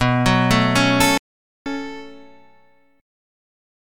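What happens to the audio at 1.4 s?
At 1.4 s the audio is inside a dropout to silence running from 1.18 to 1.66 s: roughly 0.48 s of pure silence, no room tone, likely from a momentarily lost input.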